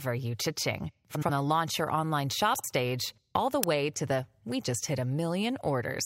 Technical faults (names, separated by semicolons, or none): frames out of order; uninitialised buffer